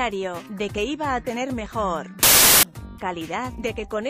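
From 2.23 to 2.63 s, a wrong sample width fits 32-bit data read as 24-bit: loud noise buries the sound, slowed to 0.75 speed, unlike byte-order errors.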